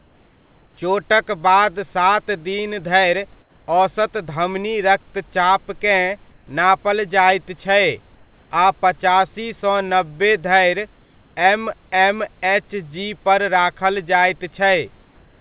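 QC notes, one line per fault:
3.41–3.68 s, 6.32–6.47 s, 11.03–11.36 s: comfort noise in place of the background. In the pauses after "सात दिन धरि", "धरि औसत धमनी रक्तचापकेँ" and "पचासी सँ नब्बे धरि", the room hiss turns steady and featureless, shifting by about −2, −4 and +1 dB. Unlike a dropout, it never goes silent. The likely cause is receiver-synthesised fill during discontinuous transmission.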